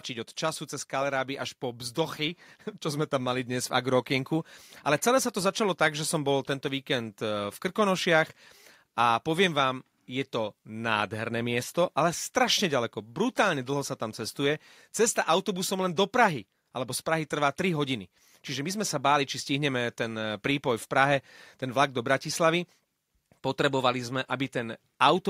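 From 0.39 s to 11.4 s the level creeps upward: automatic gain rising. The automatic gain control judged the incoming speech too quiet and raised its gain by about 4 dB, slowly across those eleven seconds. The voice and the background swell together. On a waveform the envelope widens steadily through that span, and on a spectrogram the noise floor between phrases brightens along with the speech.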